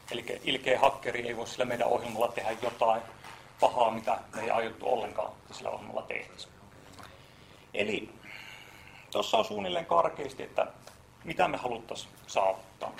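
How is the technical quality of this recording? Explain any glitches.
The recording carries an overlap-add ripple from start to finish. The sound was split into windowed frames and rejoined with overlaps that don't sum evenly. Level therefore swings by about 11 dB around a hundred times a second. It comes across as a metallic buzz with extra tones around each note.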